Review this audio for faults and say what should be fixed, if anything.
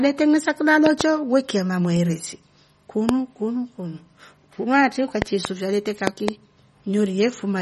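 Watery, swirly speech with nothing above 11.7 kHz throughout is MP3 compression, likely at a low bitrate such as 32 kbps. The encoder discards the treble and flickers weak frequency lines on and off. Sharp loud pops, far louder than the speech, sit on top of it: a double pop at 0.86–1.03 s just before "weki ya mamweresi", one at 3.09–3.11 s before "kunu kunu kunuatri", a pair at 5.22–5.47 s after "kunu kunu kunuatri", and a pair at 6.07–6.31 s. These are likely voltage spikes from a plug, switch or static entering the signal chain. To prevent both, record or deliver at a higher bitrate or lossless, and secure connections and grounding before recording.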